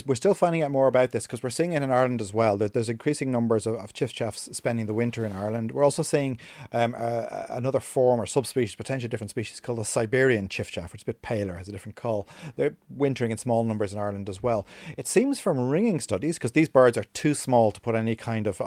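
No technical faults can be heard anywhere in this speech recording.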